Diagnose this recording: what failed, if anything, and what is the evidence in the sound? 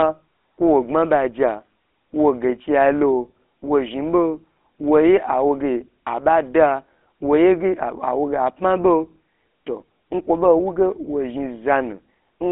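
The codec stage failed: the speech went through a GSM full-rate codec. Throughout, the voice has a buzzy, gravelly roughness. The band runs from about 250 Hz to 3.5 kHz, with nothing above 3.8 kHz. The codec rebuilds the voice from a vocal-tract model driven by coarse, sparse pulses, which fits a 13 kbps full-rate stream.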